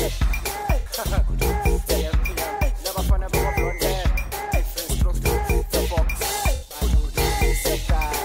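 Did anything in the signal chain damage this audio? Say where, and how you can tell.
Yes. The codec stage shows AAC frame loss with concealment. Short smeared, phasey patches occur at 0.80 to 0.90 s and 4.28 to 4.33 s. A broken-up stretch spans 6.54 to 6.76 s, with one gap of about 100 ms. The decoder patched missing frames from the last good spectrum.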